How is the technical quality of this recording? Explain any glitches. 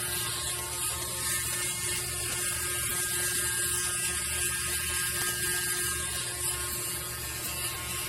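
The recording has two technical problems: a layered compression texture across the whole clip and a steady train of ticks running almost its entire length.

Throughout, the audio has nothing above 16.8 kHz and carries several different compression artefacts mixed together. This is likely transcoding between lossy codecs, with the sound passing through MP3, then Vorbis, then HE-AAC, each at a low rate that points to roughly 48 kbit/s. Each encoder treated the previous one's artefacts as real signal and added its own. The lowest cut-off in the chain stayed in place. A single-codec encode would show one consistent artefact character. Here several different kinds are heard at once.

From 0.16 s to 8.04 s there are word clock ticks, around a hundred of them, one roughly every 70 ms. The receiving device was running on its own clock rather than locking to the sender's, off by a few hundred parts per million. 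Each time the two clocks slipped past each other, a single sample was dropped or repeated, producing a sharp tick of uneven strength. Buffer dropouts leave audible gaps at irregular moments. These ticks leave no gap and keep a regular pace.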